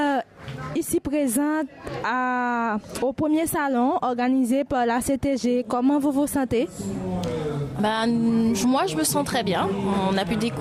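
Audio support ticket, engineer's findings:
No faults found on review. Nothing heard in the audio calls for a fix or further investigation.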